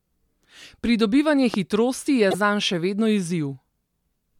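At 1.54 s, just before "hitrosti je zanj še", a single loud pop cuts through the speech. It peaks roughly 10 dB above the voice. The speech carries on underneath. The likely cause is a sudden voltage pulse from a plug, switch or static.

From 2.31 to 2.35 s, between "hitrosti je" and "zanj še vedno", there is a brief glitch. This is damaged data in a compressed stream. Corrupted bytes made the decoder misread frames and lose sync for about 40 ms.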